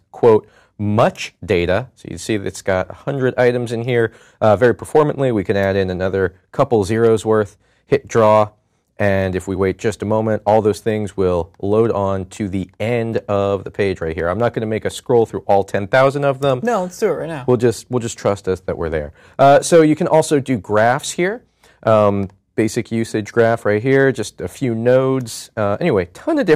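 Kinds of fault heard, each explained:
hard clipping: crackle on loud peaks throughout, as the signal runs about 2 dB beyond a stage's limit and under one percent of samples are cut flat.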